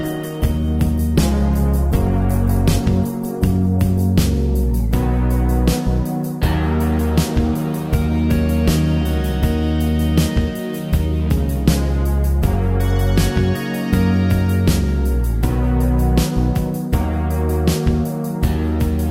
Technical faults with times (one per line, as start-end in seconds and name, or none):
0.00-4.00 adaptive stream starting at a low bitrate